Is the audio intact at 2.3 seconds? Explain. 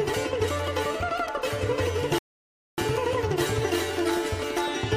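No. At 2.3 seconds the player has run out of downloaded audio and halted playback to wait for more data, a rebuffering stall lasting from 2.18 to 2.78 s. The sound drops abruptly into silence, then picks up again exactly where it stopped once the data arrives. No material is skipped or lost; the stall inserts roughly 0.59 s of dead air, stretching the clip's timeline by that amount.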